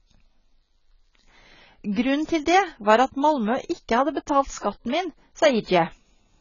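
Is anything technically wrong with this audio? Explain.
Yes. Throughout the speech there is heavy AAC compression, likely AAC-LC at a rate that fits 16 kbps. Nothing survives above 7 kHz, and the starved bands make sibilants fizzy and vowels warble. A plain low-pass filter would dull the top without this smeared, watery texture.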